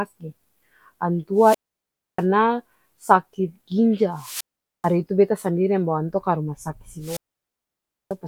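Wireless microphone squelch dropouts at 1.36–2.25 s, 4.14–4.95 s and 6.99–8.15 s: the radio signal fades, the receiver's squelch mutes the speech for about 0.64 s, 0.44 s and 0.94 s, and hiss rises before each silence.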